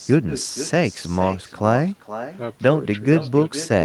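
Speech runs through the whole clip with an echo with no canceller behind it: every phrase returns roughly half a second later as a copy about 13 dB quieter and thinner than the original. That is the far end's loudspeaker being picked up by its microphone and sent back unremoved. Unlike room reverberation, which smears each sound into a continuous tail, this returns as a distinct, delayed repeat.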